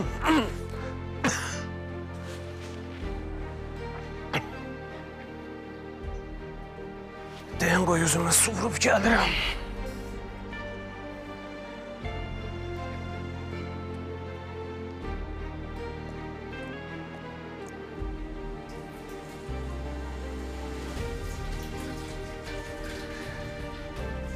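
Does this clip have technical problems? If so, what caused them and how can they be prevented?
Yes. From 16.73 to 17.61 s there is a drift correction step, most likely from clock-matching software that briefly raised the playback rate in a single jump to rebalance its buffer instead of adjusting it gradually. For those 0.88 s the audio runs about 5.4% fast, lifting pitch by roughly 92 cents, close to a semitone, before dropping back to normal speed. It can be prevented by using a resampler that corrects clock drift in small, continuous increments rather than abrupt steps.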